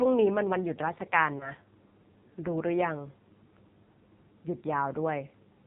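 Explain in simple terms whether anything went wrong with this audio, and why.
Yes, two things went wrong. Throughout, the speech passes through the AMR narrowband mobile codec used in older phone networks. It cuts off everything above 4 kHz and is heavily squeezed here, so the voice sounds buzzy and artificial. A plain muffling filter would only dull the sound, without that synthetic buzz.

From 1.38 to 1.51 s there are lost AMR speech frames. A single slice of sound, about 20 ms, was garbled in transmission, and the decoder filled the gap by briefly repeating what came before. The result is a short warble or dip in the voice, not the silent gap or click that a plain dropout would leave.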